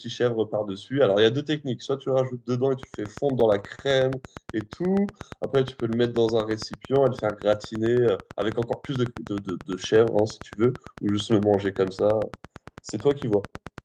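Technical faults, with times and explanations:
2.83 s to the end of the clip (13.85 s), train of clicks: a steady ticking sits over the speech and through the pauses, about 8.9 clicks per second at a regular spacing, with peaks roughly ten decibels above the speech. The clicks have the same shape each time and never stop once started. A repeating pulse like this most likely comes from electrical interference or a faulty connection or power supply injecting the same impulse into the path.
3.07 to 3.81 s, repeated stalls (stutter): the speech catches and drags five times in under a second. The longest hold lasts 33 ms, and the holds add up to 65 ms, about 9 percent of that stretch. Packets arrived late, so the jitter buffer ran dry repeatedly, and the receiver stretched the last sound each time until new audio arrived. No speech is lost, but the flow stutters.
4.42 to 5.21 s, scattered short gaps: roughly five brief holes are spread across this stretch, none longer than about 10 ms and around 50 ms in total, about 7 percent of the span. 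Individual packets went missing or arrived too late, and the receiver patched each hole by continuing the preceding sound. Nothing audible is lost, but the patches leave small ticks and momentary smears in otherwise clear speech.
5.08 to 6.24 s, jitter buffer slow-down: the speech plays at about 95 percent speed with its pitch unchanged, and sounds are slightly drawn out. The buffer was low or had just raised its target delay, so the receiver rebuilt a reserve by repeating single pitch periods and small slices of pauses many times in a row, adding 67 ms in total. Because whole cycles are duplicated rather than resampled, the tempo slows while the pitch stays the same.
8.25 to 9.31 s, jitter buffer speed-up: the speech runs at about 106 percent speed at the same pitch and sounds slightly hurried. The buffer held more audio than its target, as happens when delayed packets land together, so the receiver cut short pieces of one or a few pitch periods in a row, removing roughly 70 ms. 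Dropping whole cycles shortens the timing without shifting the pitch, which is why the passage sounds rushed rather than higher.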